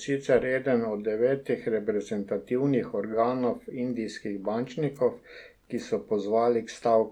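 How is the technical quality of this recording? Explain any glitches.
No glitches or faults heard.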